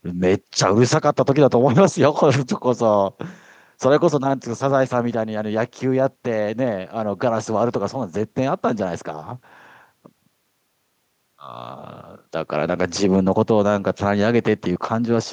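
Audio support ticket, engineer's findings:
Listened through the whole speech clip and found nothing to flag, so there's no fault to log on this one.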